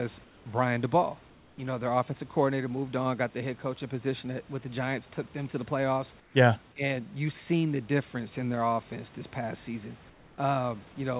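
Comfort noise in place of the background at 0.24–0.46 s, 1.3–1.58 s, 6.2–6.34 s and 10.1–10.38 s: the real room background is swapped for flat, featureless hiss about 2 to 6 dB quieter, likely from discontinuous transmission.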